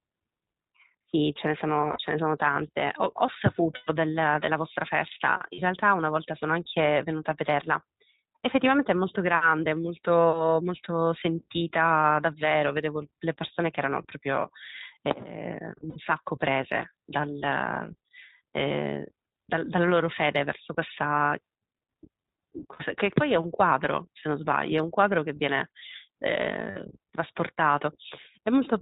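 From the start, the whole recording has that iLBC codec character: narrowband, with nothing above 4 kHz, and a slightly rough, synthetic edge on the speech that's plainly audible. It sounds like the 15.2 kbps mode with 20 ms frames. Each frame's excitation is coded on its own, so you lose brightness and some smoothness, but the speech stays clear.

On top of that come six spots of lost iLBC frames: 1.92 s for about 60 ms, 3.76 s for about 120 ms, 5.54 s for about 40 ms, then 15.90 s, 22.74 s and 26.70 s at about 60 ms each. In each gap the decoder fills in by repeating the last pitch cycle with some noise mixed in, so you hear a brief held, faintly buzzy vowel. The 3.76 s one is longest and fades a bit. Since frames don't depend on each other, the speech snaps back right away.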